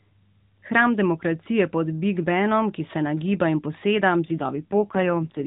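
From 4.28 s to 5.46 s an AMR rate drop cuts the codec from 12.2 to 5.9 kbps. With fewer bits for the vocal-tract model, the speech turns rougher and more synthetic, with no gap and no change in bandwidth.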